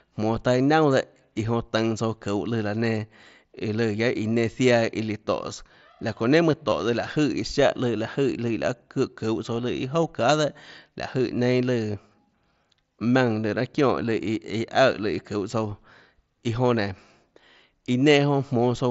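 Concealed Bluetooth headset packet loss hits this speech at 6.70, 10.02 and 11.93 s. Voice packets from headset to phone dropped out, about 15 ms at the first point and 7.5 ms at the others. The receiver filled each gap by repeating a matching stretch of recent waveform, so the single-frame breaks are nearly hidden. The mSBC link stays band-limited to 8 kHz with faint grain on louder sounds.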